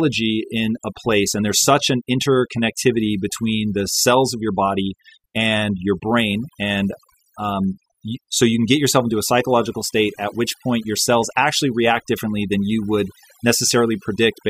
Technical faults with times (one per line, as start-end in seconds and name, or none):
0.00-14.49 overdone noise removal